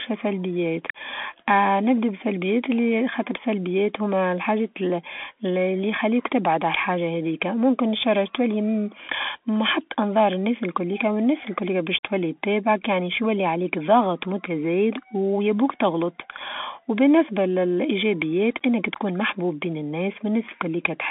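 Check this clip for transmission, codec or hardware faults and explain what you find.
One fault runs through the whole clip: the speech sounds thin, boxed-in and gritty from start to finish, with s sounds scratchy, louder passages roughened, and a granular hiss beneath the voice. Nothing reaches above about 3.8 kHz, and the band sits roughly between 300 Hz and 3.5 kHz. This is the Bluetooth CVSD headset codec, whose one-bit up-or-down coding, fitting a 64 kbps link, cannot follow fast, loud high-frequency movement. Its adaptive step overshoots and lags, producing the grit and hiss.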